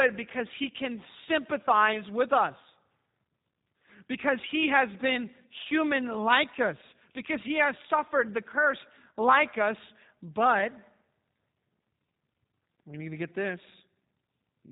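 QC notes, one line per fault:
throughout G.729 codec. The speech is rebuilt from a vocal tract model, a pitch predictor and a few pulses per frame. So it sounds rough and plainly synthetic. Nothing above 3.8 kHz survives. The narrow, grainy sound fits an 8 kbit/s G.729 stream.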